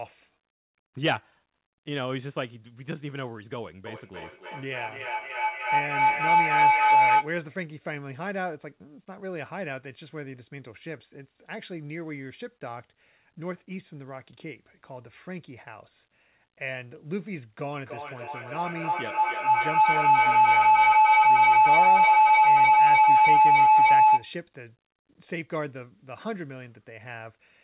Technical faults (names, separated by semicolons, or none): feedback howl